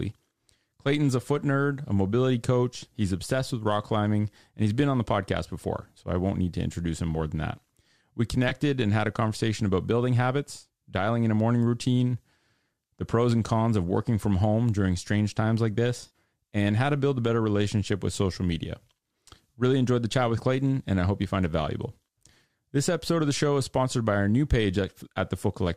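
Speech with two brief AAC frame loss with concealment patches. At 8.49–8.52 s, just before "and had a conversation", about 20 ms turns smeared and noisy. At 16.02–16.15 s, between "during strange times like" and "and how to build", 60 ms lost, scattered over 120 ms with the longest run around 40 ms, sounds phasey rather than silent, unlike a plain dropout gap.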